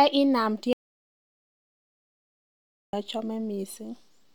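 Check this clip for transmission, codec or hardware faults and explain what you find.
One fault stands out: an audio dropout to silence from 0.73 s to 2.93 s. The speech cuts off abruptly and about 2.2 s of silence follows, with no room tone, before the speech resumes mid-flow. The likely cause is a lost input, such as a disconnected device or failed link, while the recorder kept writing silence.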